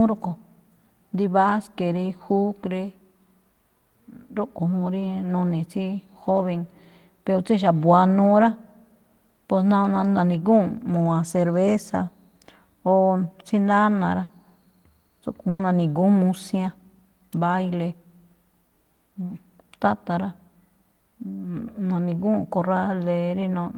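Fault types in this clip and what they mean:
Burst of packet loss: Several consecutive packets failed to arrive in time, so the receiver concealed each gap by extending the last received sound and letting it fade before playback resumed further on. It happens twice. At 14.23 s a 60 ms fill stands in for 60 ms of skipped speech. At 15.49 s a 100 ms fill replaces 100 ms of missing speech without dropping to silence. Both are heard as a short smeared buzz or hiss.
Lost packet rebuilt from error correction: A lost packet was recovered from the low-bitrate redundant copy carried in the packet after it, as in Opus in-band forward error correction, so there is no gap. At 15.59 s a 20 ms frame plays from that copy and sounds rougher and noisier than the audio around it. It sits at the tail of the second loss burst.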